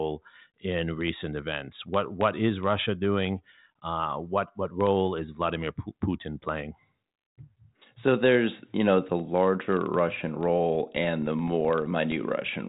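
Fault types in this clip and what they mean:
Filter restarted on every block: the filter starts each block from silence, leaving regular ticks near 23.4 Hz from 10.11 s to the end, which fits a 2048-sample block.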